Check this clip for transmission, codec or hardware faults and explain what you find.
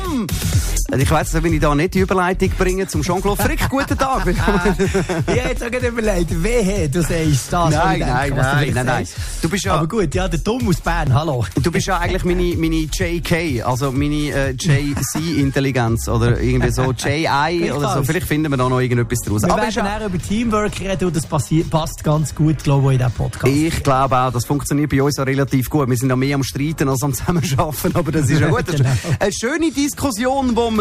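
Two brief discontinuities stand out, both fitting a dropped buffer (overrun).

Dropped buffer (overrun), at 5.57 s and 11.07 s: each point has a small jump in the sound and no gap of silence. This is likely caused by the capture side reading its samples too late, so the hardware overwrote them. A short stretch, roughly 7 ms at the first point and about 3 ms at the second, vanished, and the audio on either side was joined directly.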